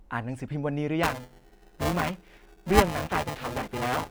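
From 1.03 s to the end of the speech, buffer tearing sets in: the writing program and the playback hardware have drifted so their positions cross within every period, leaving around two fifths of each buffer filled with audio from one lap earlier, about 5 ms stale. The hard joins produce a steady robotic buzz at 375 Hz, which fits a 128-sample buffer. Unlike scattered dropout clicks, it is continuous, periodic and heard only while sound is present.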